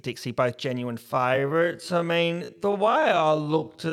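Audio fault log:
1.0–3.93 s, time-stretched section: right after "both genuine" the speech abruptly drops to half its pace while its pitch stays put. That points to software stretching the audio to fit a longer slot, likely repeating short overlapping pieces to fill the time without changing pitch. A clip simply played back slower would drop in pitch along with the tempo. Here only the timing changes.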